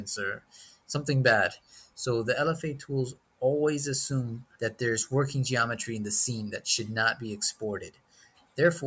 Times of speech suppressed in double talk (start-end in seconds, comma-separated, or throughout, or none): none